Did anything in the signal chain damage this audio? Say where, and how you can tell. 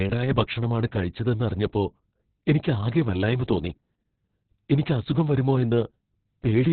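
Yes, at the codec stage: Opus voice compression throughout, with nothing above 4.4 kHz and muffled, hoarse, slightly robotic speech. A plain low-pass would only dull the sound. Here, narrowband SILK coding quantises the excitation coarsely, pointing to a bitrate around 6 kbps.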